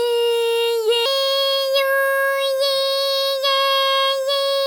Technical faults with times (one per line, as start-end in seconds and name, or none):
1.06-4.67 section at the wrong speed